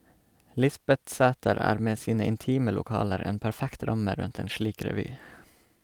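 From 4.21 to 4.23 s, one stretch of about 20 ms, consistent with a single lost packet, is a lost packet rebuilt from error correction. The decoder played the low-bitrate copy carried in the following packet, so there is no gap, but that stretch sounds rougher and noisier.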